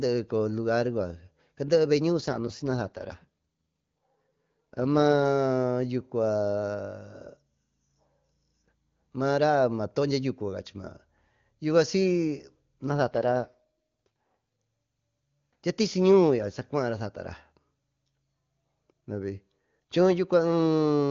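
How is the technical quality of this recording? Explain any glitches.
The speech has two AMR rate drops, at 2.21 to 5.22 s and 12.88 to 14.62 s. Each time, a weakened radio link likely made the network force the AMR wideband coder down to a lower rate and spend the freed bits on error protection. The audio keeps its full band with no gap, but turns rough and synthetic, which fits a step from 23.85 down to 8.85 kbit/s, before clearing again.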